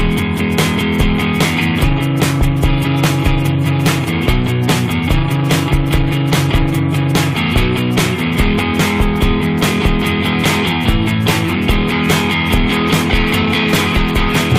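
A single loud pop lands at 8.59 to 8.61 s, a sharp transient lasting about 20 ms and peaking roughly 10 dB above the surrounding sound, which continues uninterrupted beneath it. The cause is likely a sudden voltage step or pulse entering the signal path, from a plug being seated, a switch, a static discharge or a driver glitch, with the downstream circuitry shaping that pulse into the brief thump.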